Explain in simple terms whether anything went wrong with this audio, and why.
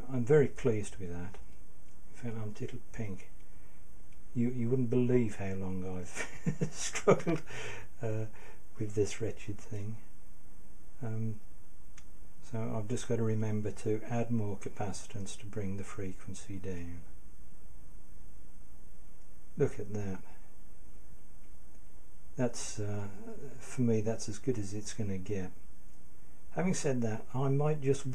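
A loud pop occurs from 7.29 to 7.32 s, a single sharp thump louder than the surrounding sound, likely from a brief electrical surge such as a switch or static discharge.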